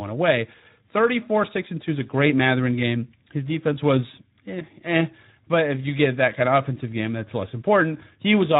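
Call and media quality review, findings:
Speex codec damage, whole clip. Speech hoarse and grainy, with a noisy edge. Clearly audible. Component: Speex encoder, low-to-mid quality setting. Sound fits roughly 11 kbps. Mechanism: CELP coder short of bits for the excitation signal. Pitch pulses rebuilt coarsely, so voicing turns rough and noise-like.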